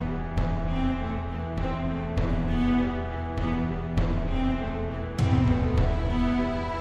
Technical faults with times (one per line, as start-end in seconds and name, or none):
none